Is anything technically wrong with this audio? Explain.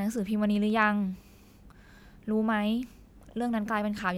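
No, nothing technically wrong turns up in this speech recording; there's nothing here that needs fixing.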